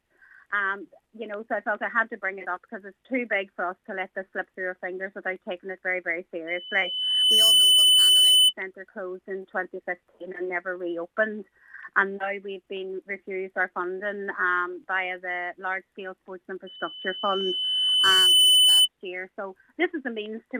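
Loudspeaker feedback squeal appears from 6.47 to 8.53 s and again from 16.67 to 18.88 s. A microphone is picking up its own loudspeaker. A 3 kHz tone swells over a second or so and rises to about 10 dB above the sound.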